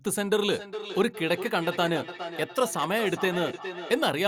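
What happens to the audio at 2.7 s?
At 2.7 s the speech is caught in a feedback echo between two devices. It runs from 0.5 s to 4.1 s. Two devices on the same call share a room. One plays what the other's microphone sent, and that microphone picks it up again. Each echo canceller only removes its own device's output, so the loop survives. Each word returns roughly every 0.4 s, thinner and more ringing. The loudest return sits about 10 dB below the speech.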